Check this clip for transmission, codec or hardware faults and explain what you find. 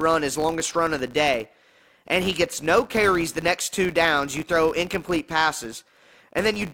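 A steady 100 Hz buzz runs under the speech from start to finish, rising and falling with its loudness. The cause is a filter restarted on every block: it forgets its state, so each block starts from silence with a small transient, repeating 100 times per second.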